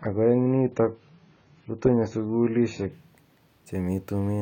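From 0 to 2.92 s the speech plays from an adaptive stream starting at a low bitrate: dull, artefact-heavy, nothing above 7.1 kHz, consistent with roughly 16 kbit/s AAC, then abruptly brighter without a gap. A spectrogram shows a hard ceiling that lifts at 2.92 s.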